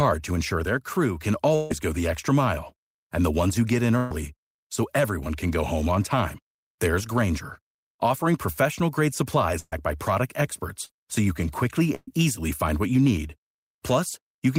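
This is a speech recording with four bursts of packet loss, at 1.55 to 1.71 s, 3.97 to 4.11 s, 9.59 to 9.73 s and 11.95 to 12.08 s. In each, a run of packets arrived too late or not at all. The receiver stretched the last sound and let it fade. That gives a held buzz or dying hiss. Speech then resumes further on. About 150 ms is missing at the first, 130 ms at the next two, and 120 ms at the last. The third and fourth bursts drop to silence for about 30 ms and 20 ms before the audio returns. There is also a short concealed packet loss at 10.86 to 10.90 s. About 30 ms never reached the decoder in time. The receiver covered it by extending the preceding sound and blending back in. It is heard as a brief smear or wobble, not a clear gap.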